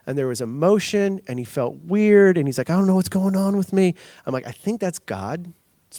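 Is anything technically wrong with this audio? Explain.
No, nothing here stands out as technically wrong; it's just speech, with no problems to point to.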